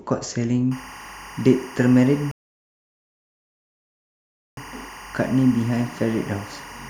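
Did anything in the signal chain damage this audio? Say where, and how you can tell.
Yes. From 0.71 s to the end, a steady chirping warble sits behind the speech. This is timecode bleed at the analogue wiring stage: linear timecode from an adjacent track or cable has coupled into the audio path. The code flips between tones near 1 kHz and 2 kHz with a 24 frames-per-second pattern, roughly 20 dB below the speech. A spectrogram would show two thin horizontal lines at those frequencies, broken into a rapid rhythmic texture and unaffected by the speech.

A rebuffering stall in playback cuts the audio to complete silence from 2.31 s to 4.57 s. It then resumes exactly where it stopped, having added 2.26 s without losing anything. The player's buffer emptied and it waited for more downloaded audio before continuing. On the waveform this appears as a flat line between those times. On the spectrogram it is a fully blank vertical band, with even the timecode lines missing, because the whole playback paused.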